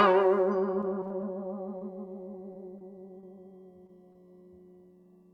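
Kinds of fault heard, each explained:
repeated packet loss (robotic sound): five patched gaps packed between 0.81 and 1.25 s make the music choppy, a dense cluster rather than one isolated smear.
short concealed packet loss: six separate 20 ms holes, each filled by extending the last sound, leave brief smears or wobbles, spaced well apart rather than bunched.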